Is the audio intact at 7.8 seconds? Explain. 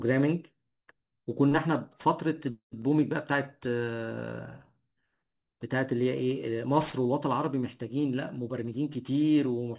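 No. At 7.8 seconds the speech carries aliasing, present across the whole clip. The sound points to a drop to an 8 kHz rate with no anti-alias filter, so energy above 4 kHz folds back as gritty, unrelated tones roughly 25 dB below the speech. A clean low-pass would only sound muffled, without that metallic grit.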